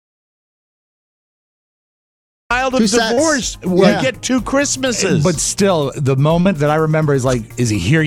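The audio opens in silence, with no room tone, until 2.51 s: an audio dropout to silence, likely from an input lost while recording continued. Brief smears at 3.13 s and 6.41 s are short concealed packet losses, where about 40 ms never arrived and was filled by extending the preceding sound.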